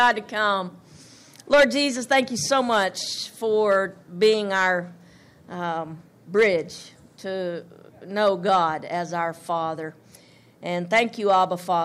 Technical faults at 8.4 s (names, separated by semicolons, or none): hard clipping